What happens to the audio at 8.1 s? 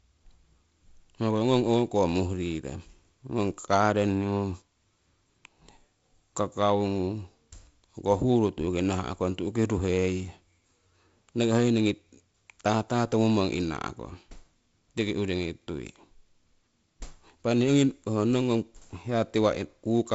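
Nothing goes wrong at 8.1 s; the speech carries on intact through that moment, with the G.722 wideband telephone coding leaving its usual light upper-band hiss and nothing above about 7.7 kHz.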